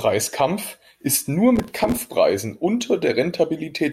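Processor overload crackle runs from 1.56 to 2.07 s, just after "ist nur". The processor repeatedly fails to deliver very short buffers in time, which sounds like blocks of roughly a millisecond and a half. Dozens of those buffers drop to silence, and their hard edges make a gritty crackling tear across the speech.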